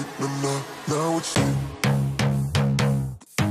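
A CD skip at 1.35 s: after a very brief mute and tick, the sound resumes elsewhere because the laser jumped to a different turn of the disc's spiral.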